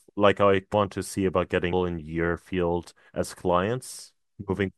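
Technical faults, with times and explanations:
0.72 s, compressed frames skipped: about ten 26.1 ms frames go missing, so the speech leaps ahead roughly a fifth of a second, with a brief smeared blip at the join.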